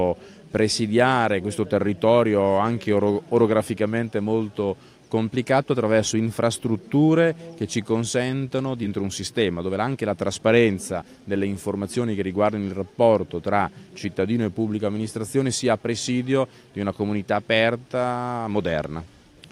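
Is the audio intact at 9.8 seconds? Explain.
No. At 9.8 seconds the audio sits inside a jitter buffer speed-up running from about 8.97 to 12.06 s. The receiver's buffer had built up more delay than intended, so it kept cutting out short slices of a pitch period or so, running the sound at 112% and trimming roughly 0.4 s in total. It sounds hurried yet keeps its pitch, unlike a sample-rate error, which would raise the pitch, and unlike packet loss, which leaves gaps.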